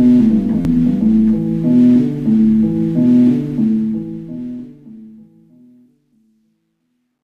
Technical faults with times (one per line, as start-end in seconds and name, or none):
0.62-0.65 repeated buffer
3.51-7.23 truncation distortion on a fade